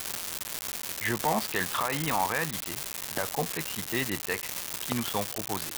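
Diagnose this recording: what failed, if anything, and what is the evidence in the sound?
An unreliable data bit at the converter output puts a constant crackle through the speech and its pauses. Every spike is the same size, about -15 dBFS, unlike level-dependent clipping.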